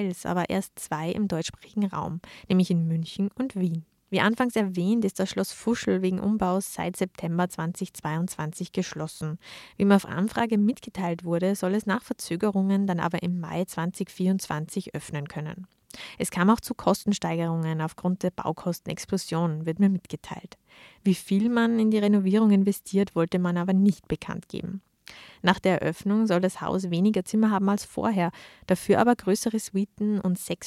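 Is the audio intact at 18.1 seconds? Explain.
Yes, at 18.1 seconds the audio is intact, with no dropout, click, distortion or other fault to be heard at that moment.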